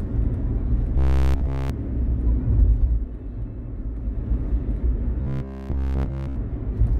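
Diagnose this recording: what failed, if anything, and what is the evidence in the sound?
A rigid 66.7 Hz metallic buzz at 0.98–1.70 s and 5.22–6.36 s is robotic sound from repeated short buffers, likely a starved buffer looping one 15 ms block.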